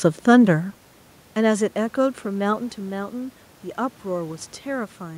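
No technical faults are audible in this speech clip.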